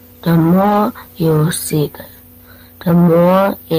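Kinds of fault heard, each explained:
Lost packet rebuilt from error correction: around 0.61 to 0.75 s the speech turns briefly rough and noisy without dropping out, as low-bitrate backup copies stand in for lost packets.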